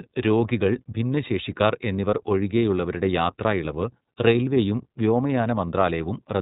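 From start to end, the speech runs through the iLBC codec, which codes each frame's excitation independently. The grain fits 30 ms frames at a 13.33 kbps mode. Nothing above 4 kHz survives, leaving speech dull, plainly rough and somewhat synthetic.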